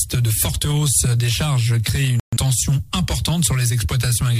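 At 2.20 s the sound cuts to silence until 2.37 s, a digital broadcast dropout: the receiver muted on failed frames, which fits about three lost frames. Unlike concealed packet loss, nothing is smeared or repeated. Playback resumes further on, with that stretch gone.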